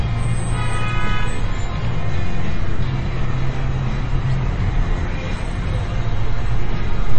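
MP3 compression, present throughout, is the likely cause of the plainly audible damage: nothing survives above 8.4 kHz, and weak detail flickers with a watery, swirly texture, which fits a starved bitrate near 30 kbps forcing the encoder to drop treble and sparse spectral lines.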